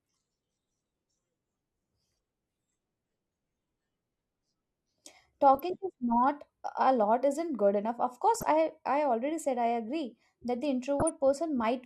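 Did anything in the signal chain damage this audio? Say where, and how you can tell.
Yes, the damage happened at the DAB reception and decoding stage. Residual bit errors got past the error correction into the MP2 audio stream. The result is DAB burbling in three short bursts: 5.55 to 5.60 s, 8.35 to 8.43 s, and 11.00 to 11.10 s. Corrupted samples put short blips of noise into single sub-bands, with five or six frames hit per burst, so the speech picks up brief blips of noise. That fits a low error rate, a fraction of a percent.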